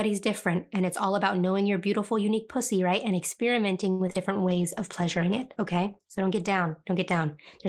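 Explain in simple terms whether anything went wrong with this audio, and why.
Between 3.91 and 4.18 s, the connection lost or delayed four bits of audio in quick succession, the longest about 80 ms. Each hole was covered by stretching the sound just before it. This repeated packet loss makes the speech choppy and robotic, with small pieces missing.

From 4.32 to 4.63 s, the receiver's reserve of incoming audio ran low, or it had just decided to keep a bigger reserve. To build it up, it repeated tiny slices of sound, adding about 48 ms. This jitter buffer slow-down plays the speech at roughly 87% speed without changing pitch, so it sounds briefly drawn out.

From 4.45 s to the end, the system decided the connection was weaker and cut the amount of data for the audio in half, staying at its lowest for about 2 s. This call bitrate drop makes the speech sound rougher and more muffled.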